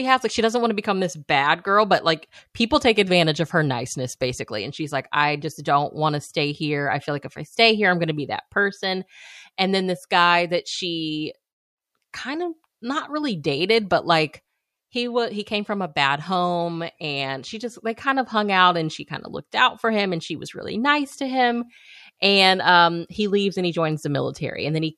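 No technical faults can be heard anywhere in this speech recording. Nothing in the signal chain stands out at any point to mark or explain.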